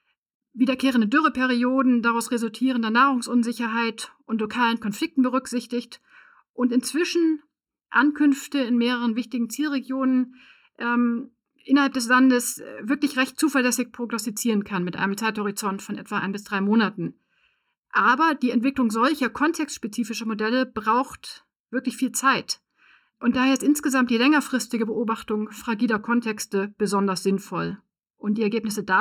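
Throughout the speech, one channel runs late by just under a millisecond before the two are summed to mono, causing channel delay (comb filtering). The shared signal cancels in evenly spaced notches starting around 700 Hz, so the sound is hollow and phasey from start to finish.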